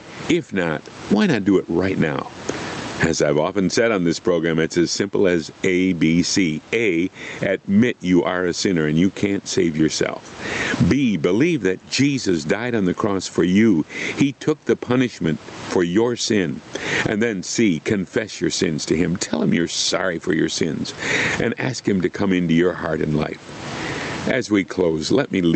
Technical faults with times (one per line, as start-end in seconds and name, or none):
0.00-25.56 gain pumping